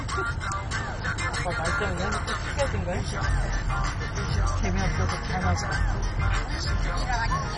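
From start to finish the audio is band-limited, with nothing above about 10.4 kHz, and has a dull, gurgling, granular texture. The likely cause is heavy MP2 compression at a rate that points to about 32 kbps, where starved upper sub-bands switch off and the rest are coarsely quantised.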